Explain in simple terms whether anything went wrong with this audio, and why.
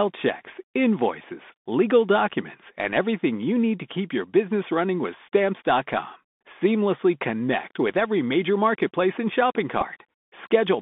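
Bluetooth CVSD headset codec, throughout: the sound passes through a narrowband headset link that keeps only about 200 Hz to 3.6 kHz, leaving it muffled, scratchy on s sounds and with a grainy hiss under the speech.

Bluetooth headset packet repeated, at 9.81 to 9.84 s, just after "major marketplace and shopping": about 7.5 ms of sound was lost and the previous chunk replayed, causing a brief buzzy tick.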